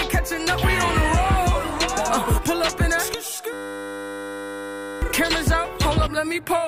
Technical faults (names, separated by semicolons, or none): system hang loop